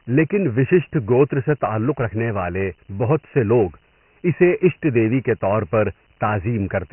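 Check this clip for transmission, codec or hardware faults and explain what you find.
The clip is speech carrying one fault for its whole length: Dialogic VOX ADPCM coding. Everything above 3 kHz is missing, which fits 4-bit ADPCM at 6,000 samples a second, around 24 kbps. Each sample stores only a coarse step from a running prediction, so the speech is dulled and muffled and trailed by a gritty, granular hiss. On a spectrogram the energy stops sharply at 3 kHz, with grainy noise filling the band below. The waveform shows the noise riding on every syllable.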